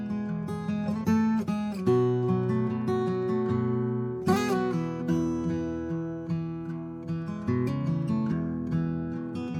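The music arrives intact, with no dropouts, distortion or other technical faults anywhere in the signal.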